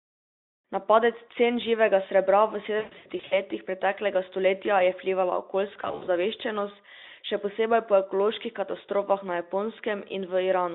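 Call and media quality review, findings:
2.79–3.39 s: VoIP packet loss concealed by the speech codec. About 320 ms lost across 520 ms, longest run 120 ms. The decoder extends the last pitch and filter with decaying gain, giving a buzzy or noisy, fading smear.

5.73–6.08 s: same fault, milder. 160 ms concealed within 320 ms, longest run 60 ms.

Unlike raw dropouts, the sound stretches, weakens and recovers gradually after each burst. The Speex narrowband path carrying it shows little or no coding damage.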